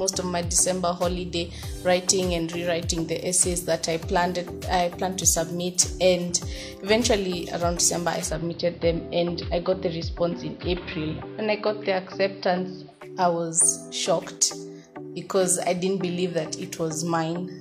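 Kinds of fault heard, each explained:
Digital radio blending to analogue: the receiver loses the digital stream and cross-fades over 277 ms to the station's AM broadcast, so from 8.09 to 13.19 s faint hiss rises at unchanged level. A plain low-pass filter would add no hiss.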